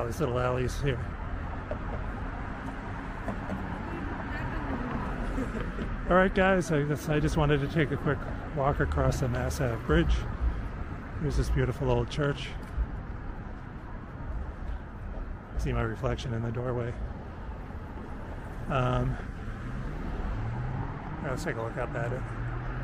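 No technical fault can be heard anywhere in the audio. Nothing in the sound points to a problem in how it was captured, processed or delivered.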